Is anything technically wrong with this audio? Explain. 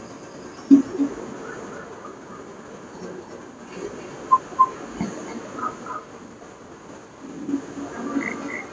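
Yes. Throughout the speech there is echo with no canceller. The far end's loudspeaker feeds the microphone and nothing subtracts it, so each phrase returns roughly a third of a second later, about 11 dB quieter and thinner. Unlike room reverberation, it is a distinct delayed repeat rather than a smooth tail. The missing content above 8 kHz comes from the normal call microphone processing, not from the echo.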